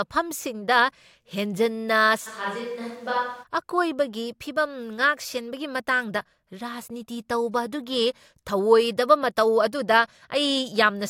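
From 2.28 to 3.42 s the speech abruptly turns hollow and roomy, thinner in bass and about 5 dB quieter, with more room noise: likely a switch to a distant microphone.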